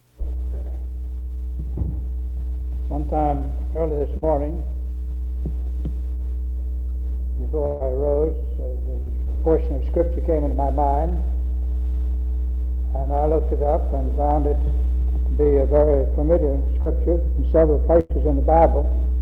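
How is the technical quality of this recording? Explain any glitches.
The recording suffers from network dropouts: three short concealed packet losses and two bursts of packet loss.

Short concealed packet loss occurs at 4.17, 9.02 and 16.82 s. Each time, about 40 ms never reached the decoder, and the receiver extended the preceding sound to cover the hole. It is heard as a brief smear or wobble. On a spectrogram it appears as a smoothed, repeated sliver.

Bursts of packet loss occur at 7.66–7.82 s (140 ms lost) and 18.00–18.12 s (100 ms lost). The receiver continued the last sound while fading it out, so each gap becomes a held buzz or fading hiss. A waveform shows a decaying envelope there, and the audio then resumes further on with that stretch missing.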